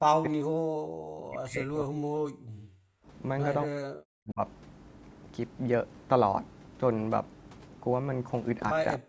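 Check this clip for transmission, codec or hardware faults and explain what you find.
The speech shows two echo-canceller faults: the talker's speech is repeatedly pushed down, and at one point the background is gated away.

Speech suppressed in double talk occurs at 0.09 to 0.34 s, 0.71 to 0.85 s, 1.19 to 1.99 s, 3.65 to 4.4 s and 8.98 to 9.09 s. The likely cause is that both ends spoke at once and the echo canceller could not tell the local talker from loudspeaker echo, so it attenuated everything. The speech dips by roughly 40 dB or breaks up, with the longest losses near 1.2 to 2.0 s and 3.7 to 4.4 s.

Background gated by the echo canceller appears from 2.71 to 3.07 s. While the far end was playing through the loudspeaker, the canceller clamped the microphone down hard, by about 40 dB, for about 0.4 s. The room tone drops into near silence and then returns when the suppression releases. 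Throughout, the call microphone processing trims the lowest bass and leaves nothing above 8 kHz.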